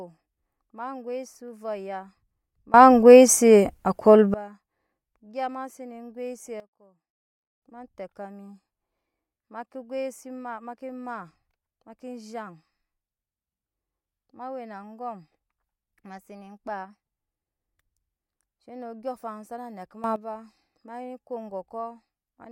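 At 2.74 s the speech and its background noise leap up together by about 24 dB and stay there until 4.34 s. From 6.6 s to 7.62 s both drop by about 17 dB, and from 20.04 s to 20.16 s they briefly jump up by about 12 dB. These sudden gain jumps step in from one sample to the next with no ramp, most likely from a gain setting or bit shift applied instantly.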